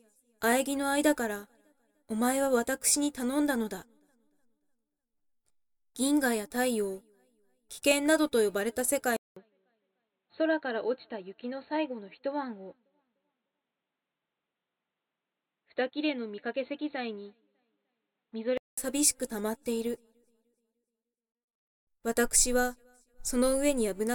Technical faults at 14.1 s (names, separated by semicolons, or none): input switched to a poorer device